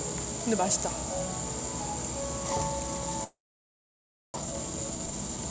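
At 3.24 s the sound breaks into a brief buzzy continuation that fades within about a tenth of a second, leaving about a second of silence before audio resumes at 4.38 s. This is likely a long network dropout: packets stopped arriving, and the receiver stretched the last sound before giving up and going quiet. When the stream returns, roughly 0.6 s of material is gone, and playback is running about half a second behind where it was.

From 4.41 s to the end at 5.51 s, the sound plays noticeably fast, about 139 % of normal speed, yet its pitch stays put. This rushed, compressed quality comes from a jitter buffer speed-up. The buffer was holding more audio than it aims for, so the receiver trimmed many short pitch-period slices in quick succession to catch up, discarding something like 0.4 s in total. The sound throughout also carries the G.722 call codec's band limit, with nothing above 8 kHz.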